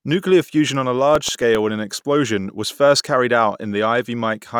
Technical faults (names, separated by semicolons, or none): CD scratch ticks